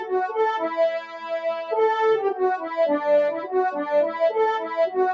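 A speech-tuned noise suppressor left running on the sound, which is the fault of a noise suppressor applied to music or sounds, treats sustained and ambient parts as noise throughout. Its gain rises and falls by around 10 dB, so the sound pumps and thins while attacks pass more intact.

At three points the suppressor judges the sound to be noise and pulls it down harder, which is sound cut by the noise suppressor. From 1.04 to 1.31 s it drops by about 8 dB. From 2.58 to 2.74 s and from 3.39 to 3.54 s it drops by about 7 dB each. Held sound sinks and tails end early, and nothing extends above 8 kHz along the call's microphone path.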